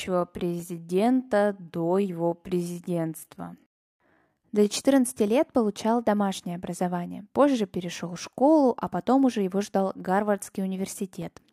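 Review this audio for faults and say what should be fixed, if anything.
From 0.0 to 4.74 s, software likely slowed the audio to about 0.68 times its pace while holding pitch, repeating short slices to fill the length. This time-stretched section drags, and the pace snaps back to normal just before "лет получал домашнее образование". To prevent it, re-record or edit the material to the required length instead of stretching it.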